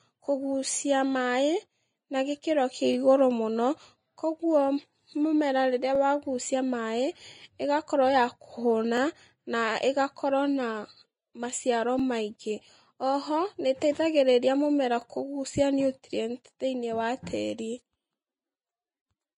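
Vorbis compression runs through the whole speech clip: the sound is hissy and grainy, with nothing above 10.6 kHz and plainly audible codec damage, likely from low-bitrate Vorbis coding near 28 kbps, where coarse treble quantisation turns fine detail into noise.

Overlapping chunks appear at 2.93–2.95, 5.95–5.97, 8.97–8.99, 11.99–12.01, 15.01–15.03 and 18.03–18.05 s. Each new 3-second chunk begins 20 ms before the previous one ends, so that sliver repeats, giving a click or stutter every three seconds.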